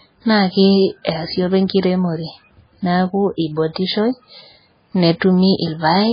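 From start to finish the speech carries heavy MP3 compression damage, likely from a very low bitrate that fits about 16 kbps. Nothing is heard above 5 kHz, and weak spectral detail flickers between frames, giving a watery, swirly texture. A plain low-pass filter would dull the sound without that shifting warble.

At 5.19 to 5.21 s a pre-echo appears. A short hiss spreads about 20 ms ahead of a sharp attack, because quantisation noise sized for the loud onset filled the quiet part of its transform block. Unlike a click, this smear comes before the attack.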